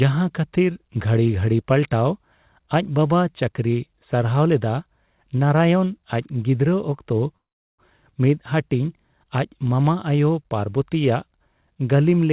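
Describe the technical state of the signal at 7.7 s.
At 7.7 s the signal is inside a call audio freeze (7.36–7.82 s). A brief fading tail gives way to about 0.39 s of silence, likely a jitter buffer starved by delayed packets. Unlike a dropout, nothing is lost: the sound resumes where it stopped, about 0.43 s late.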